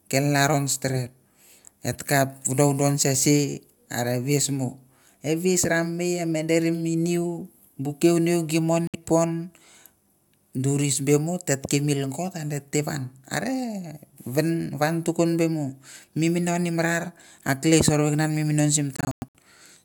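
A likely Bluetooth dropout, with audio packets failing to reach the headphones in time, cuts holes in this speech clip. At 8.87 s the sound goes silent for about 64 ms, which fits roughly three lost frames, then resumes further along, as if it had kept playing. From 18.96 to 19.36 s the gaps cluster, adding up to about 235 ms of silence spread over 384 ms, with the longest single hole about 107 ms.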